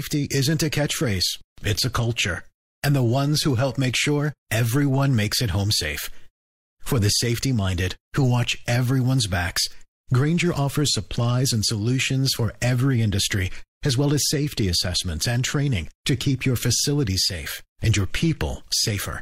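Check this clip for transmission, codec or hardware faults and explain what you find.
One fault turns up in the speech. Hard clipping at 7.12 to 7.16 s: peaks just reach the converter's ceiling and are flattened, adding high harmonics heard as a brief crackle.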